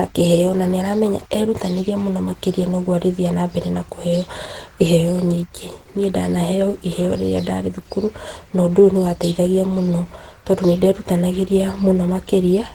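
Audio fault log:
throughout: Opus compression, hoarse, grainy speech fitting roughly 16 kbps, likely Opus hybrid coding; the spectrogram shows noise-filled bands up to 20.1 kHz, with few holes.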